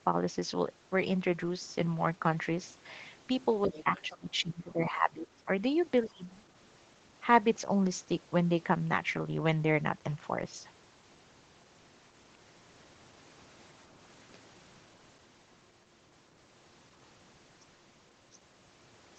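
Speech suppressed in double talk begins at 3.64 s and runs to 5.49 s. The talker's voice sinks by as much as about 20 dB in patches that add up to roughly a second and a half. This is likely the echo canceller failing to separate the near talker from loudspeaker echo while both sides spoke, so it turned both down.

The other side's voice leaking through is audible inside that stretch, from 3.71 to 3.84 s. It is a faint scrap about 20 dB under the talker. A second, quieter scrap follows from 6.03 to 6.08 s, around 30 dB down. Both are likely loudspeaker playback that the canceller left in the microphone signal.

Right after it, from 6.08 to 6.25 s, a brief suppression of roughly 150 ms pulls the voice down again by about 20 dB. Across the clip, the audio tops out at 8 kHz through the Opus call path.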